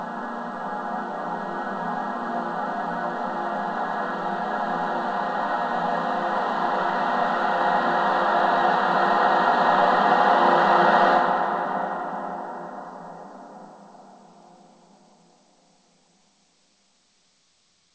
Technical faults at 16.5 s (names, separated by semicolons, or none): none